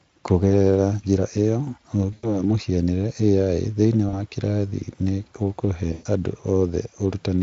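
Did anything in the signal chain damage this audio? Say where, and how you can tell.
Yes, at the network stage: VoIP packet loss concealed by the speech codec at 2.13–2.41 s after "njĩra ĩyo", 4.09–4.19 s before "kĩrathi nĩ ũkũhe andũ", and 5.93–6.07 s after "kĩrathi nĩ ũkũhe". The gaps match about 100, 40 and 120 ms of missing packets. Instead of silence, as a plain dropout would give, the Speex decoder smears the last sound into a fading buzz or coloured noise that stays weak briefly after packets return.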